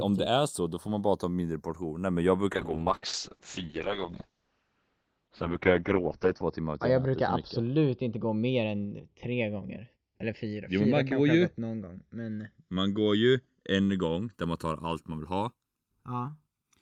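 Speech with a slow, sweeping flanging throughout: the channels are drifting apart on separate clocks roughly 70 ppm out, their delay creeping to about a millisecond. From 2.52 s to 14.39 s the sound turns rough and muffled, with the top end cut from 20 kHz to 6 kHz. This is a call bitrate drop, consistent with a fall from 32 kbps to about 7 kbps, and it is worst for 3.9 s.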